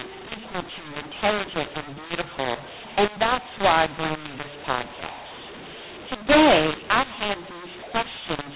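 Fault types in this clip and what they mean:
mu-law and A-law mixed up, throughout the clip: the speech was coded with the mu-law curve of G.711 but decoded as though it were A-law, so each 8-bit code is mapped back to the wrong level. Loud and soft samples come out at scrambled sizes, giving a harsh, distorted, buzzy speech sound, and the quietest samples are pushed well above silence, so pauses fill with noise. The speech is limited to the 4 kHz telephone band.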